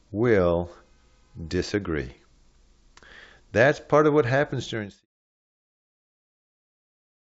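Nothing here points to any technical fault.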